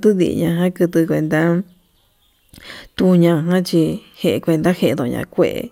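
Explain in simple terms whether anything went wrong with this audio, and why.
Nothing went wrong with this audio; there is no fault to point to anywhere in the recording.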